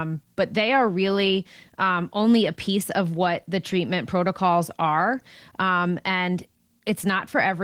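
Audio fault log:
throughout: Opus voice compression. The speech sounds hoarse and faintly robotic, its lower band coarsely coded and the band above 8 kHz thin and patchy, which fits hybrid coding near 16 kbps. A spectrogram shows blotchy upper energy shifting in 20 ms steps.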